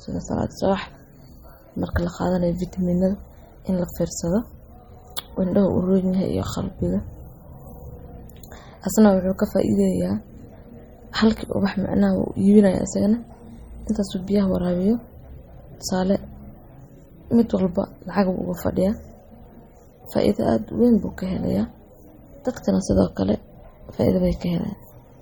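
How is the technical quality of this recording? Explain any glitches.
The technical quality is limited by plainly audible codec damage throughout the 25 s of speech. The likely cause is MP3 compression, and the damage fits a low bitrate around 32 kbps.

Across the whole clip, the encoder ran short of bits and zeroed weak frequency lines, which flicker on and off from frame to frame. This makes the speech sound watery or swirly, with metallic chirps on s sounds and smeared attacks. On a spectrogram it shows as scattered holes that blink in and out, under a flat ceiling with nothing above 18.7 kHz.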